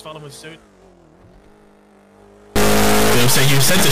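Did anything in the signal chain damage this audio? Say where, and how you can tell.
Yes, at the sample-format conversion stage. From about 2.56 s right through to the end, the audio turns into a brutally loud, buzzy square wave that slams between silence and hard clipping. That's an integer read as float: the raw sample bits get interpreted as floating-point numbers, so values come out either almost zero or wildly past full scale. The behaviour fits 32-bit integer data being read as 32-bit float.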